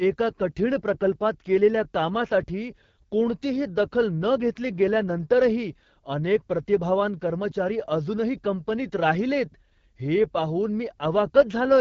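From start to finish, the speech carries the sound of the AMR wideband (HD Voice) codec. It is running at one of its lowest rates. The roughness fits about 8.85 kbit/s. Below 6.4 kHz, the codec rebuilds the speech from a pulse-driven vocal tract model. At this rate that model is starved of detail, so voiced sounds turn raspy and gritty. The damage is plainly audible. Above that band is only shaped noise. Nothing reaches past 7.4 kHz.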